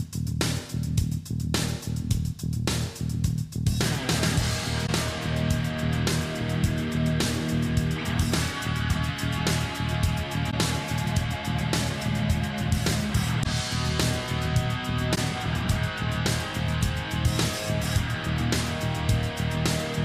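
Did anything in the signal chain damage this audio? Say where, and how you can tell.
Yes, at the codec stage: four short corrupt frames concealed by the AAC decoder, at 4.86 to 4.90 s, 10.50 to 10.54 s, 13.44 to 13.46 s and 15.15 to 15.18 s. Each spans roughly 25 to 35 ms, consistent with one or two damaged frames. On a spectrogram each appears as a narrow vertical band of faded or smeared energy. The waveform shows a brief envelope sag rather than a spike, because the decoder detected the bad bits and filled those frames by muting or reusing the last good spectrum.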